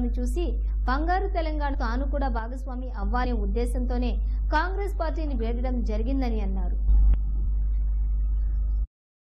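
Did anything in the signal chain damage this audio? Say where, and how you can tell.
Yes. Compressed frames skipped at 1.73 s and 3.24 s point to the codec or storage stage. At each point the audio jumps forward, about a fifth of a second at 1.73 s and about a tenth at 3.24 s. Both jumps are whole multiples of a 23.2 ms frame, which fits roughly ten and five frames missing from the file or rejected by the decoder as damaged. Because neighbouring frames overlap, each join is a short smeared blip, not a sharp click.

Sudden gain jumps appear from 2.39 to 3.02 s, where the level drops by about 6 dB, and from 6.88 to 7.14 s, where it rises by about 9 dB. Each change happens between one sample and the next, with no ramp, and the background noise moves with the sound. That shows the whole digital signal was rescaled together, likely by a gain setting or bit shift applied in the processing or driver stage.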